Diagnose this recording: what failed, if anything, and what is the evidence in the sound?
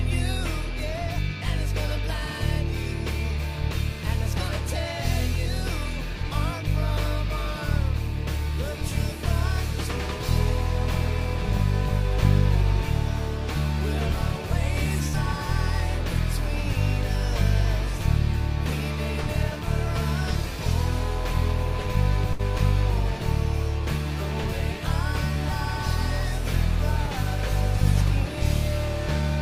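The network dropped a burst of packets twice, at 15.07 to 15.16 s and at 22.33 to 22.42 s. Each time, the receiver's concealment stretched the last decoded sound for about 60 ms, fading it into a held, dulling tail instead of silence, and then playback resumed with roughly 60 ms of material gone. That skip, rather than a late restart or a clean digital mute with clicks, separates it from a local buffer underrun or a converter dropout.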